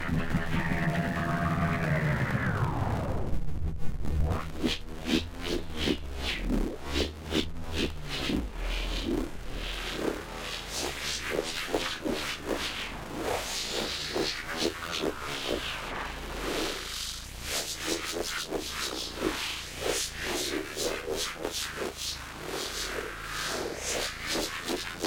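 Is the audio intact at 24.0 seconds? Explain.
Yes, the audio is intact at 24.0 seconds, with no fault at that moment.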